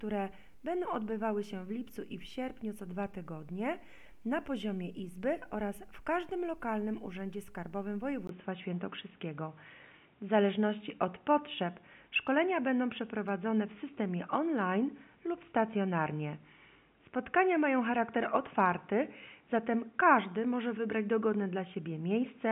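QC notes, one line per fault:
8.27–22.5 s, input switched to a poorer device: the input likely changed mid-recording to a lower-grade microphone or headset. After a 20 ms gap the sound turns dull and boxy, with nothing above 3.8 kHz, a small level shift and a faint new noise floor.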